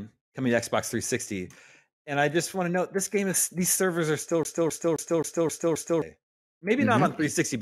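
From 4.43 s to 6.02 s the speech locks into a CD stuck on one turn. A scratch keeps throwing the laser back one track at the same point on the disc. So the same short slice of audio, about 264 ms long, plays six times in a row. A brief mute falls at each jump. The result is a fast, even stutter, the classic sound of a skipping CD, before playback moves on.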